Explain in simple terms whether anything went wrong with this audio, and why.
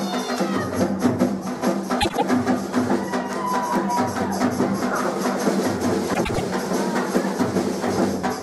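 Two short stretches of the audio play in the wrong order, a fault called frames out of order. At 2.01 to 2.23 s, and again at 6.13 to 6.41 s, two neighbouring chunks of sound arrived swapped and were played that way. The chunks are about 78 ms each in the first spot and about 105 ms in the second, which fits three and four frames per chunk. You hear a brief garbled flutter. No time is lost.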